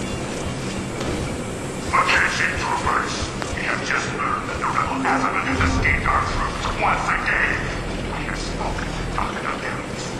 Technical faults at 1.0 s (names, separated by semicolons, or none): loud pop